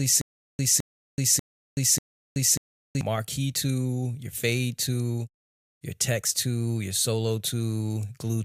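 The audio opens with stutter with silent gaps, already under way and lasting until 3.01 s: a 213 ms fragment repeats 4 times every 590 ms with 377 ms of silence between, likely from a stalled stream. On a spectrogram it shows as identical blocks separated by blank columns.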